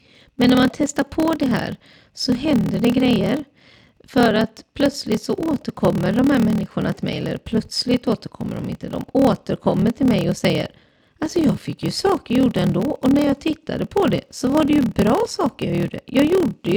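A low, steady buzz at about 38 Hz runs under the speech for the whole clip, and everything plays slow, at roughly 0.89 times normal speed, while the pitch stays about where it should. This is a block size mismatch (padded). One stage writes shorter blocks than the next reads, and each block's shortfall is filled with zeros. The tiny gap repeats at the block rate, causing the buzz, and stretches the timing. This fits 1024-sample blocks being read into larger ones.

From 9.81 s to 15.82 s, regular ticks appear once every second, about seven in all. They can be heard only where speech is present. These are periodic USB or driver dropouts. A background task stalls the bus or audio driver at a fixed interval. Each time, a sliver of audio, roughly a tenth of a millisecond, is replaced with silence. The sudden break in the waveform makes the click.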